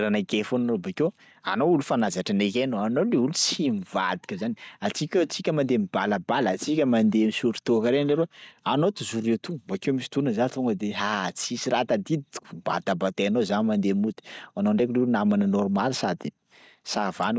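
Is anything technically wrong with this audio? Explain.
Yes, there is gain pumping throughout the speech. The gain ducks by around 10 dB under each loud sound, which squashes the dynamics. This is likely a microphone gain set far too high, with a fast limiter clamping down on peaks. A noise gate would cut the gaps toward silence.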